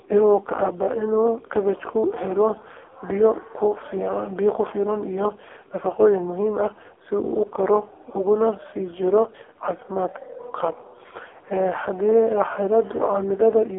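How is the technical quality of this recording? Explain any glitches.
Pretty rough, honestly. The whole thing has gone through an AMR narrowband mobile codec. Throughout, nothing above 3.6 kHz survives and the low end is cut near 300 Hz, giving a thin phone-line band. The damage is heavy: speech comes out buzzy and synthetic, which fits one of AMR-NB's lowest modes, around 5 kbps, where a crude vocal-tract model driven by sparse pulses stands in for the real signal.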